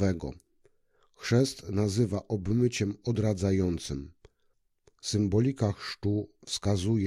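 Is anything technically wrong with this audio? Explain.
No, nothing technically wrong can be heard here.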